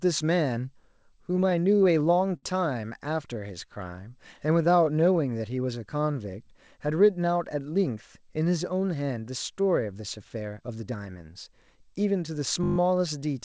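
Between 1.22 and 2.45 s the speech catches and drags through eight brief hitches, the longest about 59 ms, with roughly 123 ms of held-over sound in all and nothing actually dropped. These are repeated stalls (stutter). Packets kept reaching the receiver late, so its jitter buffer ran dry again and again. Each time, the receiver stretched the last sound to cover the gap. That patching fills about a tenth of the passage.

From 3.27 to 6.43 s the speech sags to about 93 % of its normal speed. Syllables are drawn out, but the pitch stays where it was. This is a jitter buffer slow-down. With its reserve running low, the receiver repeated single pitch periods and slivers of pauses many times over. Across this stretch it added about 220 ms of material to rebuild its cushion of buffered audio.

Between 8.51 and 10.95 s the opposite happens. The speech turns hurried, running at about 108 % of normal speed with the pitch unchanged. 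This is a jitter buffer speed-up. The buffer was holding more audio than it aims for, so the receiver trimmed short pieces of one or a few pitch periods in quick succession. It shed around a fifth of a second of delay this way.

At 12.64 to 12.78 s a short burst of buzz at about 50 Hz interrupts the sound. This is a system hang loop. The computer or its audio driver briefly froze while the sound hardware kept replaying the same 20 ms of its ring buffer, seven times in a row. Because the loop is so short, it is heard as a buzz rather than a stutter, and practically no audio was lost. Throughout the clip the call codec's band limit is audible, with nothing above 8 kHz, which fits G.722.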